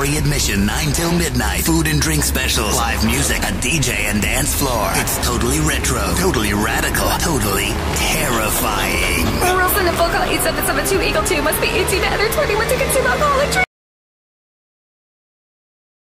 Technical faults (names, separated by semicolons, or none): audio dropout to silence